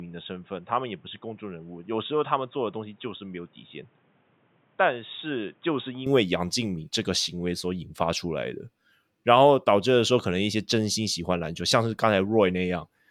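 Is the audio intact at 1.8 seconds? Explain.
No. From the start until about 6.06 s the speech sounds like it's coming through a poorer input device, likely a switch to another mic or headset. Nothing gets through above 3.8 kHz, so it's dull and boxy, a bit quieter, with a faint new noise floor underneath.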